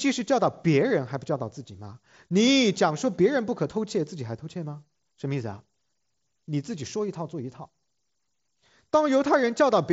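No technical faults are audible in this speech.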